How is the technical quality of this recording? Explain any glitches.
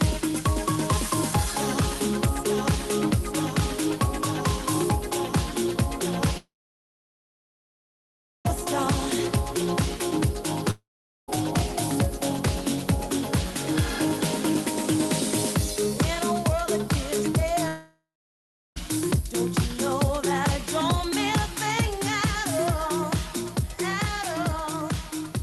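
The recording has three clear breaks where the audio drops out for up to about two seconds, while the call-codec path itself, with high frequencies cut off above 12 kHz, sounds as expected.

The breaks at 6.37–8.47 s, 10.71–11.30 s and 17.68–18.78 s are most likely a long network dropout. Each begins with a short fading buzz continuing the last sound, then near-silence lasting about 1.96 s, 0.45 s and 0.72 s. The sound resumes with the gap's content missing. On a waveform these show as flat, empty stretches, and on a spectrogram as blank vertical bands.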